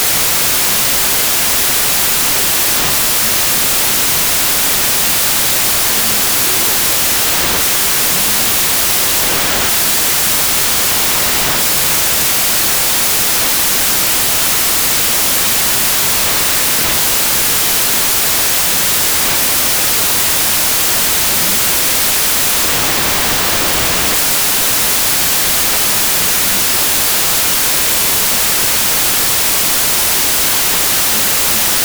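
From start to finish there's a wrong sample width problem. It sounds like 32-bit samples read back as 16-bit, so each value splits into two mismatched halves. You get loud noise with the real sound buried underneath, playing at half speed and an octave low.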